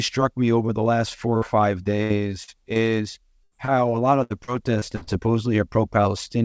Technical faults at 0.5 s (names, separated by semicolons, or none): none